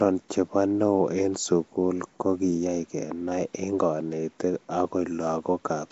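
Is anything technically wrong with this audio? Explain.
Yes. Nellymoser compression runs through the whole clip, start to finish. The speech has a rough, hissy halo and a smeared, underwater quality, and nothing is present above about 7.7 kHz. The likely cause is Nellymoser Asao, the old Flash microphone codec, at a rate that fits 32 kbps. It codes the signal in short blocks at a fixed bit budget, so weak bands receive no bits and are filled with noise, which gives the grainy haze and blurred detail.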